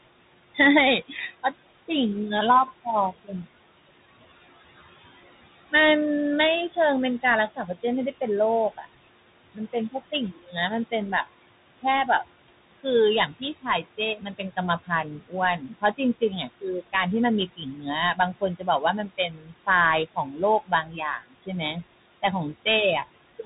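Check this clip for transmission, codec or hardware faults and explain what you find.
Two faults run through the whole 23-second speech recording, and a third recurs in seven stretches.

Noise suppressor artifacts are present throughout. The room noise, which sits about 15 dB below the speech, is pulled down by about 17 dB in the gaps and then rises again under each phrase. The suppressor decides band by band and frame by frame what counts as steady noise.

The Bluetooth CVSD headset codec also shapes the entire clip. Nothing above 3.8 kHz comes through, giving the narrow, boxy headset sound, and the damage is plainly audible. CVSD sends a single up-or-down bit per sample with an adaptive step, which fits a 64 kbps link. Loud high-frequency sounds outrun that step and break up, sibilants come out scratchy, and a grainy hiss lies under the speech.

Speech cut by the noise suppressor occurs at 0.55–1.9 s, 2.67–3.31 s, 6.69–7.84 s, 8.77–8.86 s, 9.54–11.26 s, 11.8–16.94 s and 17.56–22.67 s. 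Within these spans the suppressor mistook quiet parts of the speech for noise and attenuated them by about 12 to 21 dB, with the deepest drops in the last two stretches. These are brief bites adding up to a fraction of a second per span, and around a second or more in the final two. Soft consonants and word endings sound swallowed or faint.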